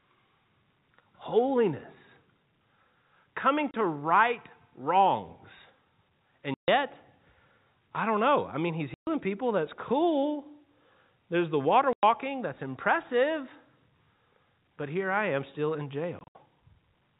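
Packet loss filled with silence cuts the speech five times: 30 ms at 3.71 s just before "right wrongs", 140 ms at 6.54 s, 130 ms at 8.94 s, 100 ms at 11.93 s between "the water" and "that's impressive", and scattered gaps over 160 ms from 16.19 s after "I am still in", the longest 70 ms. Every hole is a whole multiple of 10 ms, which fits 10 ms packets. Plain silence, not a repeated or faded fragment, sets this apart from concealed loss. The narrowband G.711 telephone sound is audible throughout.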